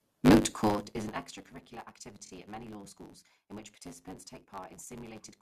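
From the start the speech carries a block size mismatch (truncated): the end of every block is discarded, which fits 512-sample blocks read short. This produces a steady 100 Hz buzz at the block rate and speech running 1.16 times fast at roughly normal pitch.

At 2.25 to 2.30 s, repeated frames produce a brief stutter. A block of about 23.2 ms plays twice more after its first play, so the decoder restates the same fragment and adds 46.4 ms to the audio's duration.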